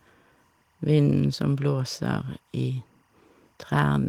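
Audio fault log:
throughout timecode bleed: a faint steady chirping warble behind the speech, about 45 dB below it, from linear timecode leaking in, its square wave flipping between roughly 1 and 2 kHz at 23.976 frames per second.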